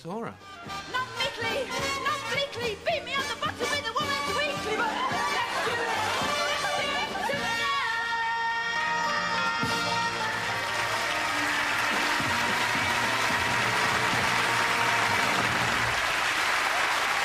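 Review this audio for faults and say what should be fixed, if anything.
A background task is periodically blocking the USB bus or audio driver, causing periodic USB or driver dropouts from 14.06 s to 17.14 s. Every 1.024 s the stream stalls and about a millisecond of audio is lost and replaced by silence, about four times in all. Each gap breaks the waveform abruptly, so it is heard as an evenly spaced tick that occurs only while sound is present. To prevent it, find and disable the interfering background process or driver polling, or move the interface to its own USB controller.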